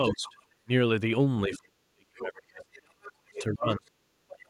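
A speech recording in which a second, fainter voice bleeds in at 0.04–0.44 s, briefly at 1.54–1.58 s, at 2.73–3.44 s and at 4.29–4.33 s, ranging from about 5 dB to about 20 dB below the speech. This is the other side's voice leaking through, likely loudspeaker echo the canceller left in the microphone signal. The main talker also dips and drops out, by about 20 dB at 0.12–0.69 s and as deep as about 40 dB at 1.48–2.68 s and 3.2–4.5 s. That is speech suppressed in double talk, likely the canceller turning everything down while both sides spoke at once.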